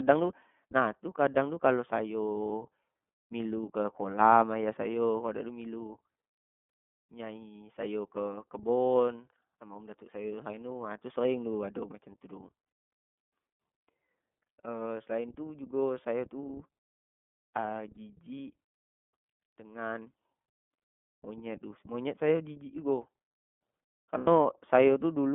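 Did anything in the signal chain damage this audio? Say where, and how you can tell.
Yes. At the codec stage, the speech is rough and slightly synthetic throughout, confined to 200 Hz–3.4 kHz. That fits the iLBC codec's 13.33 kbps mode with 30 ms frames.

At the network stage, lost iLBC frames produce brief held, buzzy vowel sounds at 12.65–12.89 s (scattered, longest gap about 70 ms), 17.94–17.98 s and 24.18–24.28 s. There the decoder repeated the last pitch cycle, then recovered immediately.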